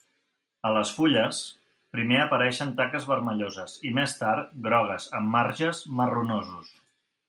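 Throughout, a resampler restarted on every block converts 24 kHz to 48 kHz in 250 ms chunks. Each edge is misconverted, giving soft ticks at 4 Hz under the speech.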